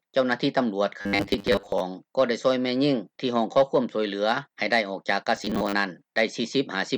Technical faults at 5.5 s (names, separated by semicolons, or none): robotic sound from repeated short buffers